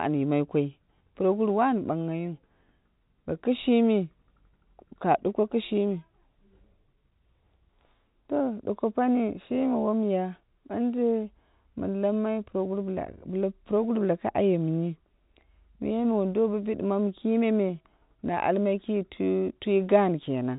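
No technical faults can be heard in this speech recording.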